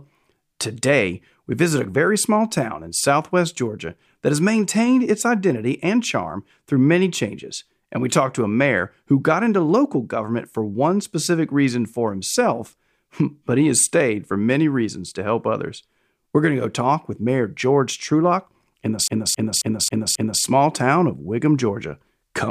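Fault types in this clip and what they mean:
CD stuck on one turn: a scratch keeps throwing the laser back a track, so a 269 ms slice repeats five times with brief mutes, 19.08 to 20.42 s.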